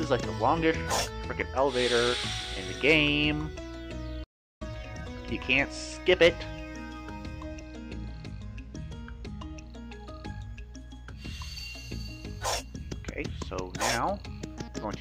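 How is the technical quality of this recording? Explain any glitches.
The recording has two linked playback glitches, both just after the four-second mark.

Playback stall, 4.23 to 4.62 s: the sound cuts off mid-flow and the output goes silent for about 0.37 s. The likely cause is that the player's buffer ran dry or its audio thread was held up, so nothing reached the output until it recovered. The gap is long enough to hear clearly as a dropout rather than a click.

Time-compressed catch-up, 4.62 to 5.36 s: right after the stall, the player makes up the lost time by running at 1.5 times normal speed. It trims small slices out of the backlog and cross-fades the joins, so the pitch stays where it was while the pacing is hurried. This hurried stretch lasts about 0.74 s, until playback settles back to its normal rate.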